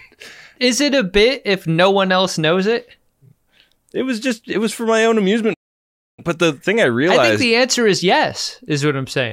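At 5.53 s, just after "was for my own", the speech halts abruptly into about 640 ms of silence. This is a playback stall, likely from the player running out of data. It resumes at 6.20 s with "but the thing I".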